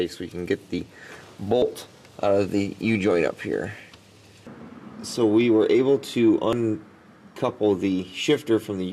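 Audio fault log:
0.79 s, 1.62 s, 3.80 s, 6.53 s: dropped buffer (overrun). Each has the sound jumping ahead by about 20 ms, likely from unread buffers being overwritten. The waveform splices abruptly with no gap, and the spectrogram shows a thin vertical broadband line.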